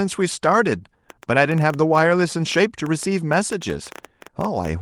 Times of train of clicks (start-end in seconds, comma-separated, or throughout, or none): 1.10-4.81